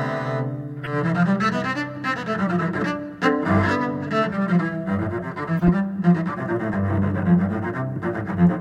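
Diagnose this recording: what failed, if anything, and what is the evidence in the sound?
The codec stage failed: damaged compressed frames reached the decoder and were played anyway. Flipped bits in those frames made the decoder misread gains and spectral codes, so energy landed at frequencies the music never had. The result is short chirpy bursts of noise at 0.82–0.87 s, 3.68–3.71 s and 5.59–5.69 s, lasting roughly two frames, one frame and several frames. They grow louder in turn, peaking at around -20, -15 and -10 dBFS.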